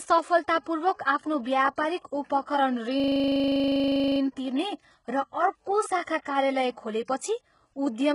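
Throughout, the treble is gritty and metallic with nothing above 11 kHz, likely HE-AAC compression rebuilding highs from copied lower bands, consistent with a bitrate near 12 kbps. From 2.01 to 2.05 s, pre-echo puts a 35 ms hiss ahead of an attack, as block-wide quantisation noise spills before the transient and softens it. From 3.0 to 4.2 s, a system hang loop repeats one 40 ms segment 30 times, a 25 Hz buzz from the hardware cycling a frozen buffer.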